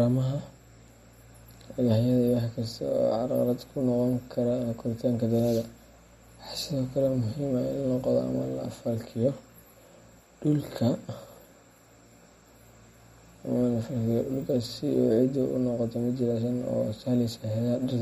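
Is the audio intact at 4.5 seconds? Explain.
No. At 4.5 seconds the speech carries damage present throughout the clip, likely from MP3 compression at a low bitrate near 48 kbps. The starved encoder drops weak frequency lines that flicker between frames, so it sounds watery, with metallic chirps on s sounds. On a spectrogram there is a flat ceiling at 15.3 kHz and patchy, blinking gaps below it.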